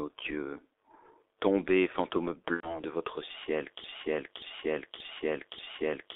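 Throughout, the speech has the muffled, hoarse sound of the G.723.1 codec, heavily damaged. The band runs from 300 Hz to 3.6 kHz, at roughly 6.3 kbit/s.

From 2.55 to 2.8 s, VoIP packet loss is concealed by the speech codec. The decoder stretches the last sound into a fading buzz or coloured noise, about 90 ms, before "de votre ciel".

From 3.84 s to the end, a broken-record loop repeats one 0.58 s piece four times after "de votre ciel". A stalled stream is the likely cause.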